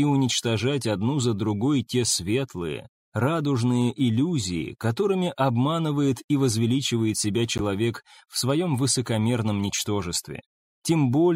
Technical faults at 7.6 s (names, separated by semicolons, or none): corrupt frame decoded